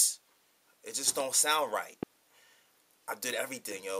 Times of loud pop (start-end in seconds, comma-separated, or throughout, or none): 1.20-1.23, 2.03-2.05